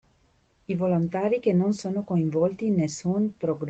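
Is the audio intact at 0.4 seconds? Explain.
Yes, the audio is intact at 0.4 seconds, with no dropout, glitch or other fault at that moment, only the ordinary sound of speech carried through a WebRTC call path.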